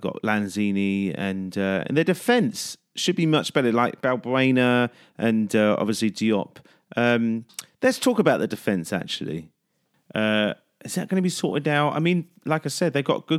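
At 7.06 s the speech hits hard clipping, lasting until 7.12 s. For that brief stretch the signal runs about 1 dB past what a stage in the chain can pass. The peaks are sliced off flat. Those squared tops add harmonics high in the spectrum. Because the overload is small and short, it comes across as a quick crackle on the loudest moment, not a sustained fuzz.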